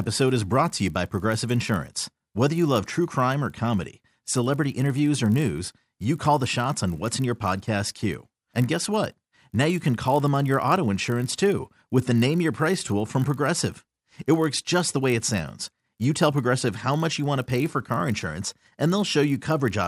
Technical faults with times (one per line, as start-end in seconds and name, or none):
0.00-19.87 resampler restarted on every block